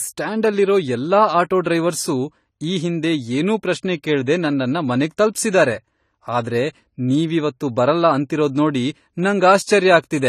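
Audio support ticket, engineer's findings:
Speech band empty above 14 kHz for the full clip, with smeared low-bitrate coding texture despite the MP3 container. Low-bitrate audio saved at a high bitrate, likely a roughly 32 kbit/s first encode re-saved near 188 kbit/s, which cannot restore the discarded content.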